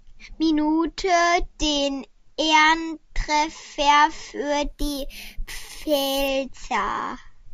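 From 4.66 to 6.28 s the speech picks up a bright, metallic fizz that rises and falls with the level of the talking. That's imaging from sample-and-hold upsampling. The rate was raised by just holding each sample with no smoothing filter. It sounds like a 16 kHz source pushed up to 48 kHz. Mirrored copies of the speech spectrum land in the 8 to 16 kHz band at about 15 dB below the signal, and that lowest copy runs backwards against the pitch.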